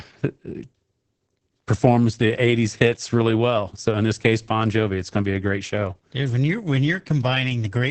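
From start to finish the speech carries heavy Opus voice compression. Nothing reaches above 8.5 kHz, and the coarsely coded excitation leaves it muffled, hoarse and a bit robotic. That points to the SILK coder squeezed down to a very low bitrate, roughly 10 kbps.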